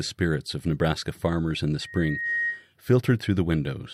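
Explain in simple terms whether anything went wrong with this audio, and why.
Loudspeaker feedback squeal from 1.81 to 2.67 s: the microphone picked up its own loudspeaker, and a 1.9 kHz tone swelled over about half a second into a squeal.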